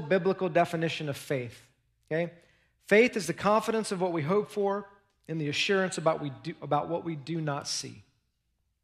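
No technical faults can be heard anywhere in this speech recording. At no point does the sound suggest that anything in the signal path went wrong.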